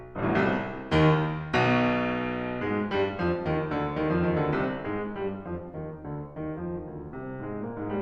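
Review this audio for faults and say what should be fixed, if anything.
No faults; nothing needs fixing.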